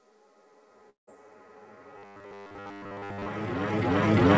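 From 0.90 s to 1.09 s the sound breaks off: what was playing smears into a brief fading buzz, then drops to near silence before returning with a chunk missing. This is likely a long network dropout, with about 180 ms of audio never arriving and the gap padded over.

Between 1.98 s and 3.28 s the sound takes on a hard, metallic 100 Hz buzz that only loosely tracks the material beneath it, the robotic sound from repeated short buffers. The cause is likely late-arriving audio, with roughly a 10 ms buffer replayed over and over while most of the real signal is skipped. The G.722 call path leaves nothing above 8 kHz throughout.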